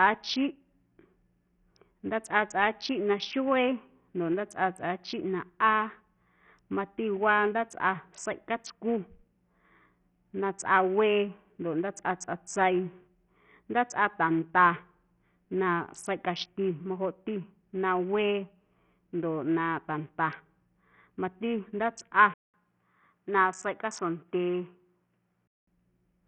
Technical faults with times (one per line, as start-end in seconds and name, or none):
0.00-26.28 Bluetooth SBC compression
22.34-25.67 input switched to a poorer device